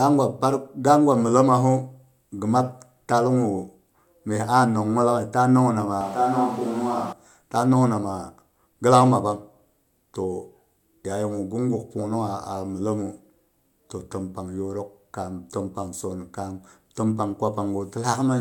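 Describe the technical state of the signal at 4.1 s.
At 4.1 s the speech is intact, with no dropout, clipping, glitch or other fault audible.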